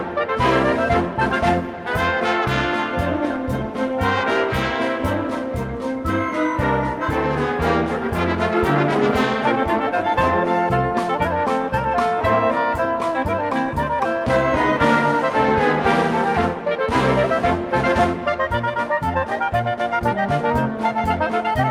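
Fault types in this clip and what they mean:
No faults detected: no dropouts, distortion or other transport or processing defects anywhere in the clip.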